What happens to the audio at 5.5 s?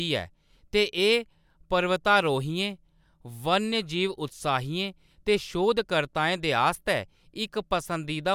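Nothing goes wrong at 5.5 s; the speech carries on intact through that moment.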